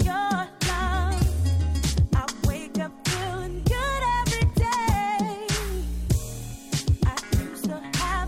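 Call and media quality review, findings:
No audible transport, capture or processing faults found in the signal path; level, continuity and timing hold steady throughout.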